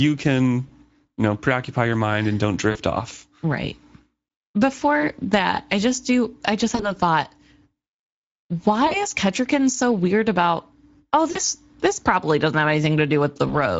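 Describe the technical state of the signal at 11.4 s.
Between 11.31 and 11.40 s, just after "so weird about oh", the sound is stretched into a buzzy tone or coloured noise that fades instead of continuing cleanly, and it stays weak or distorted into "this probably doesn't have". This is VoIP packet loss concealed by the speech codec. About 40 ms of audio went missing, which points to two lost 20 ms frames. The decoder filled the gap by repeating its last pitch and spectral envelope with falling gain. Because each new frame is predicted from the previous one, the damage lingers briefly after packets resume.

Underneath, and present at that moment as everywhere else, is plainly audible Speex codec damage. The speech has a hoarse, grainy roughness, and its upper band sounds like shaped noise rather than real detail. The coding rate fits a Speex mid-quality setting near 17 kbps. At that rate the CELP coder has too few bits to describe the excitation accurately, so fine structure is replaced by a noisy approximation.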